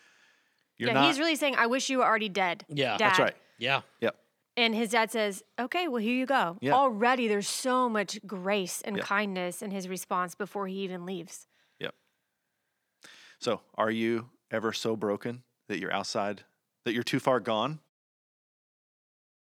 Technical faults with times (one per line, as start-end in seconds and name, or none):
none